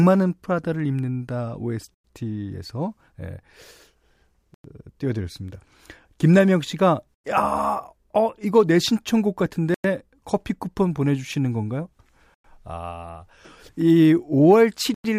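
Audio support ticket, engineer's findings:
Gap between chunks: six hard-edged silences of 0.1 s each at 1.94, 4.54, 7.14, 9.74, 12.34 and 14.94 s in the speech. Regular 2.6 s spacing, i.e. 2.5 s of audio plus the hole. Probable component: chunked transport or player scheduling, with padding or late start per chunk. Distinct from packet-loss dropouts because nothing is missing. Speech resumes exactly where it stopped, and the metronomic interval rules out random network loss.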